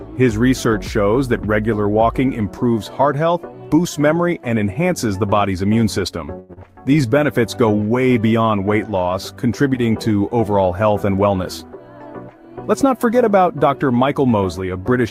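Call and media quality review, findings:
Short stall from a late packet, 6.39 to 6.51 s. One sound held about 97 ms, then playback resumes where it stopped. Jitter buffer underrun, last audio stretched until arrival. Nothing lost, which separates it from the skip ahead that follows.

Skip ahead, 6.53 to 6.59 s. Roughly 70 ms of audio missing, bridged by a 35 ms fill, leaving an abrupt join. Audio dropped in transit or by jitter buffer overflow while later audio waited, cutting delay about 50 ms. Unlike the stall, content is lost rather than held.

Jitter buffer slow-down, 6.83 to 7.20 s. Sound drawn out at 89% speed, pitch unchanged. Receiver repeating pitch periods to rebuild reserve, adding 48 ms. Gradual and spread over many small repeats, unlike the single held sound of the stall.

Jitter buffer speed-up, 11.01 to 11.81 s. Sound hurried at 111% speed, pitch unchanged. Receiver trimming pitch-period pieces to shed excess buffered delay, roughly 100 ms removed. 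Spread thinly across the span with no audible jump, which separates it from the skip ahead.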